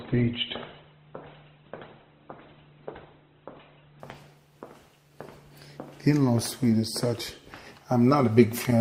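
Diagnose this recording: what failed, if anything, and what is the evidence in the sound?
Adaptive stream starting at a low bitrate, 0.0 to 4.0 s, at the network and codec stage. Nothing is heard above about 4.1 kHz, with heavier codec artefacts, consistent with an Opus rendition near 12 kbit/s. At 4.0 s, once the connection is measured, the player switches to a richer rendition, consistent with about 64 kbit/s, without any gap.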